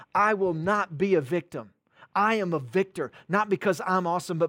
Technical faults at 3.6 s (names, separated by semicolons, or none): none